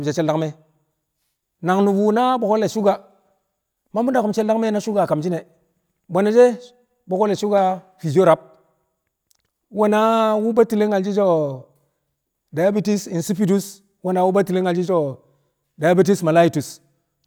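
Nothing stood out as a technical problem on listening to this speech recording.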